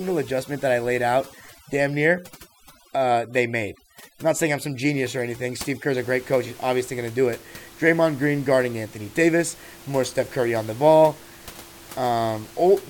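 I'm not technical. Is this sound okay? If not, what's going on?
No. For the first six seconds, from the start to about 5.97 s, the clip suffers from overdone noise removal. A noise reduction tool was pushed too hard. It switches off thin slices of the sound whenever they seem close to background hiss. The quiet edges of the speech get cut along with the noise. The background drops and breaks up into twinkling specks. It ends just before "a great coach", where the normal room noise of the recording comes back.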